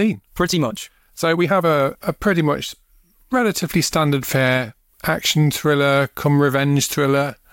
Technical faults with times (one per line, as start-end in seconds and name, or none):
0.00-2.04 time-stretched section